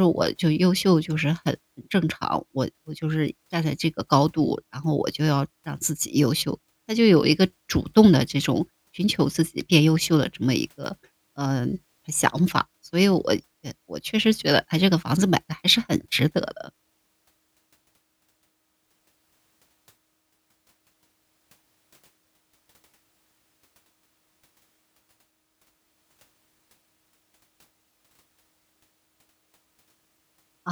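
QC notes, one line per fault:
No faults heard in this speech recording.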